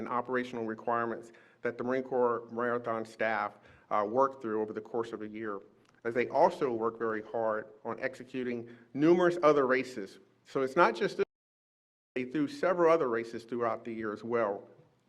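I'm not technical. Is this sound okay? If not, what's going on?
No. From 5.09 to 8.71 s there is a call bitrate drop. The connection briefly had less capacity, so the audio was squeezed into far fewer bits. It turns rougher and duller, with the highest frequencies trimmed away, before clarity returns.

At 11.23 s there is an audio dropout to silence lasting about 0.93 s, until 12.16 s. The sound cuts to complete silence with no background left, likely because the input was briefly lost, and whatever happened in that gap is missing.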